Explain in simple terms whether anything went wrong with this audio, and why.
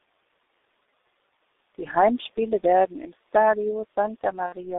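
The whole speech clip sounds muffled and hoarse, with smeared consonants, because it passed through the G.723.1 codec, an old internet-phone codec that discards high frequencies and heavily simplifies the voice.

From 4.47 to 4.55 s the voice is briefly stretched into a buzzy tone or coloured noise that fades, then recovers weakly. This is VoIP packet loss concealed by the speech codec, which fits about 60 ms of missing audio.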